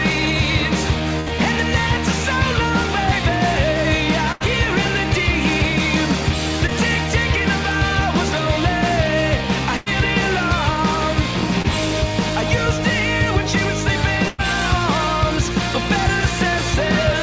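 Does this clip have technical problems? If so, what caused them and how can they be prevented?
Yes. A burst of packet loss occurs at 1.20–1.28 s, 4.32–4.42 s, 9.77–9.88 s and 14.28–14.40 s. Each time, roughly 60 to 100 ms of audio failed to arrive, and the receiver stretched the last sound into a fading buzz or hiss before jumping ahead with that stretch gone. Keeping the network path uncongested, or giving the call more jitter-buffer headroom and forward error correction, prevents these gaps.

Short concealed packet loss appears at 6.66–6.70 s and 11.62–11.66 s. About 20 ms went missing each time, and the decoder briefly continued the preceding sound and blended back, leaving a small smear or wobble where a brief sound may drop out. The same network and forward error correction measures prevent these shorter losses.

The audio itself stops at 8 kHz, which fits a wideband call codec such as G.722 at 64 kbps.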